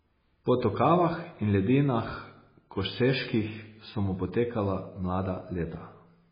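Speech that sounds watery and swirly from start to finish, with everything above 5 kHz gone so that s sounds lose their bite and the top end is dull. The heavy damage points to MP3 compression, likely at a very low bitrate around 16 kbps. Starved of bits, the encoder cut the treble at a fixed point and dropped weak frequency lines that flicker on and off between frames, causing the swirl.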